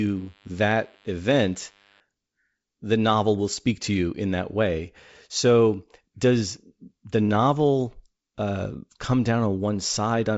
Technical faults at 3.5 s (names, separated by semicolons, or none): none